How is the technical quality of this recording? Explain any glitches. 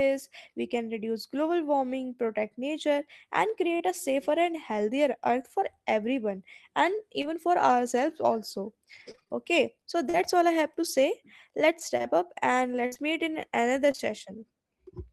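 The recording is marred by packet-loss glitches in the speech, first two isolated dropouts and then two longer choppy stretches.

Short concealed packet loss occurs at 3.77–3.82 s, just before "a safer and healthier", and at 7.22–7.25 s, between "earth for everyone and" and "for ourselves also". About 20 ms of audio never arrived in time each time. The decoder extended the preceding sound to cover the gap, producing a brief smear or wobble. On a spectrogram, harmonics flatten and blur for a sliver. The waveform shows a short, overly regular stretch.

Repeated packet loss (robotic sound) runs from 9.11 to 10.15 s, after "for ourselves also" and before "all I have to", and again from 11.97 to 14.01 s. Roughly half a dozen holes in each stretch, up to 40 ms and 56 ms long, are patched one after another. This makes the sound choppy, with pieces missing. Spectrograms show repeated smeared, striped patches, and the waveform shows recurring copied cycles.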